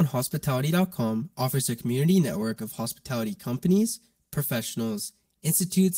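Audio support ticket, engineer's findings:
Channel delay (comb filtering), whole clip. Hollow, phasey speech with fixed spectral notches from around 100 Hz, repeating roughly every 200 Hz. One channel about 5 ms late before the mono sum. Probable component: stereo-to-mono downmix or a misaligned channel buffer.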